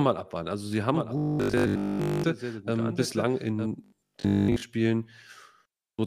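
Speech runs through a doubled audio track from 0.95 to 3.67 s, likely because a second, slower capture path or an out-of-step edit mixed in another copy of the same signal. That copy trails by about a second at roughly 10 dB below the original, so each stretch of speech returns as a clean, full-band repeat with no reverberant tail, and it cuts in and out abruptly at both boundaries. There is also robotic sound from repeated short buffers at 1.18 to 2.24 s and again at 3.84 to 4.62 s, likely because fresh audio reached the output too rarely and the playback filled the gaps by looping the most recent 20 ms chunk while the real signal was dropped. Looping at that length imposes a fixed 50 Hz buzz, which turns the voice into a stiff metallic drone that still loosely follows the speech. The first stretch is repeated essentially throughout, and the second for most of its length, so some genuine audio still gets through there.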